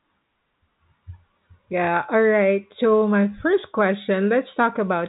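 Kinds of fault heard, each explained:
No faults can be heard in this speech.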